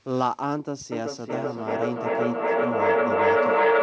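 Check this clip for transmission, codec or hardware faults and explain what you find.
There is one fault: a feedback echo between two devices, starting at 0.92 s and lasting to the end. Two devices in the same room are on one call. One plays back what the other's microphone sent, and that microphone picks it up again. Each echo canceller only removes its own device's output, so the loop survives. The speech returns roughly every 400 ms, thinner and ringing. The repeats build up rather than fade, peaking about 8 dB above the direct speech. Throughout, nothing is heard above 8 kHz, which fits a wideband call codec such as G.722.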